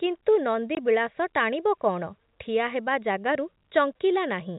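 Packet loss filled with silence cuts a 20 ms hole into this speech from 0.75 to 0.77 s: the receiver had nothing to play for that span and inserted digital silence, so the sound drops out abruptly at hard edges, a gap that fits two lost 10 ms packets. The telephone path underneath is G.711 coding, audible as the usual band limit at 4 kHz.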